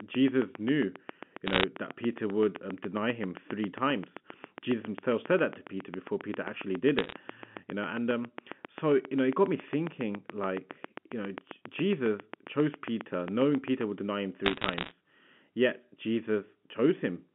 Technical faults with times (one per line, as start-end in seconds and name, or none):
0.00-13.82 train of clicks
1.47-1.64 bit errors on a digital phone line
6.99-7.13 bit errors on a digital phone line
14.45-14.91 bit errors on a digital phone line